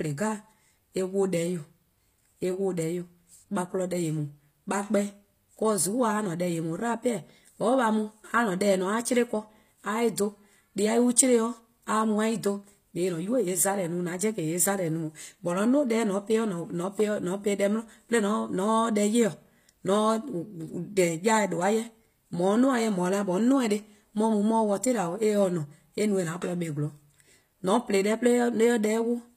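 From start to finish the treble sounds gritty and metallic, with nothing above 15.5 kHz, likely HE-AAC compression rebuilding highs by band replication, consistent with roughly 24 kbps.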